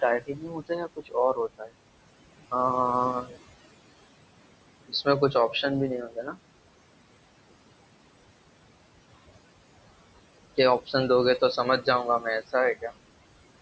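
Noise suppressor artifacts run through the whole clip: the suppressor pulls steady room noise down by about 21 dB, frame by frame, so the noise drops away in pauses and returns under speech.

Speech cut by the noise suppressor occurs at 0.2 to 1.16 s, 1.34 to 1.72 s, 3.23 to 3.36 s, 4.88 to 5.35 s and 6.02 to 6.36 s. In these spans the suppressor mistook quiet parts of the speech for noise and lowered them by up to about 20 dB. The first span loses most, roughly 0.7 s. In these spans the affected speech sounds swallowed or faint.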